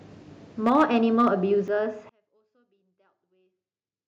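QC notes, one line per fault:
0.66–1.28 s, microphone overload: the loudest syllables in this stretch take on a harsh, crackling edge, with peaks pushing about 4 dB past the converter's limit and a small share of samples flattened. The likely cause is an input volume set too high for the converter, so the tops of the waveform are sliced off, and that squared-off shape adds gritty harmonics that weren't in the original sound.
0.69 s and 1.68 s, microphone volume stepped down: the whole signal, speech and background alike, drops abruptly in level, by about 3 dB at the first point and about 7 dB at the second. The first step lands inside the distorted passage. This is likely the call software detecting the overload and cutting the device's input volume in single jumps rather than a smooth fade, which is why each change sounds like a sudden step.
2.09–4.08 s, one channel inverted: from 2.09 s to the end the speech nearly vanishes, falling by about 39 dB and leaving only a faint residue. 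The likely cause is one stereo channel running with reversed polarity. When the two channels are combined to mono, the centred voice, present equally in both, cancels itself out, and only the small differences between the channels remain audible.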